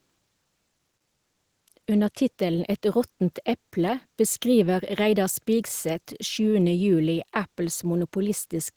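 Listening to the speech, nothing stood out as a technical problem at any point.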